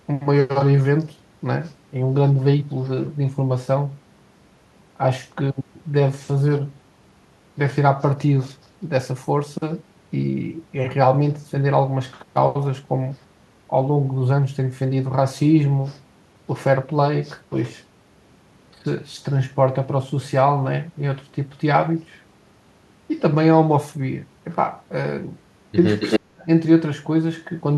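From 26.0 to 26.2 s there is an echo leak. A copy of the speech returns about 273 ms late, nearly as loud as the original. A loudspeaker echo likely slipped past the canceller.

From 26.19 to 26.47 s comes speech suppressed in double talk. The talker drops out almost completely for roughly a third of a second, likely while both sides spoke.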